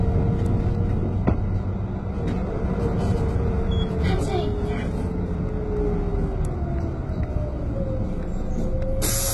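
Everyday sound here, and the whole thing is heavily mangled by what's likely HE-AAC compression at a very low bitrate, around 16 kbps by the sound of it. Nothing survives above 11.8 kHz, and the treble that remains is copied up from lower bands, so it comes across gritty and metallic rather than real.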